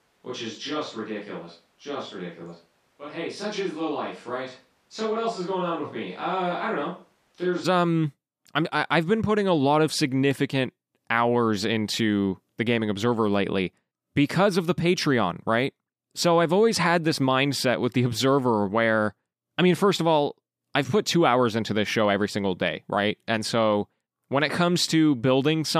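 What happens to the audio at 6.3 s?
At 6.3 s the speech is still on a distant microphone, as it has been from the start until 7.63 s, just before "um I'm I i". The hollow, roomy, bass-light sound about 5 dB quieter likely comes from a farther pickup, showing a smaller waveform, thin low-frequency spectrogram content and a noise floor only about 35 dB down.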